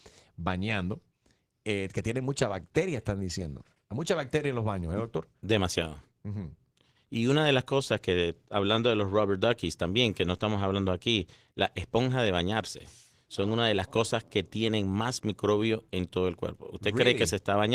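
No technical faults are audible.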